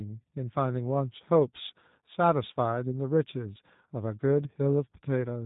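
G.729 codec damage runs through the whole of this speech recording. The speech is rebuilt from a vocal tract filter, a pitch predictor and a few pulses per frame rather than from the waveform itself, which fits the 8 kbit/s G.729A variant. Nothing above 4 kHz survives, so sibilants are dull, and the voice has a plainly audible rough, synthetic edge. VoIP packet loss concealed by the speech codec occurs from 1.13 to 1.15 s. A brief gap consistent with one lost 10 ms frame was filled by the decoder repeating its last pitch and filter settings at falling gain. The result is a short stretched sound that fades. Because each frame depends on the one before, the sound stays weak or distorted for tens of milliseconds or more after the audio resumes.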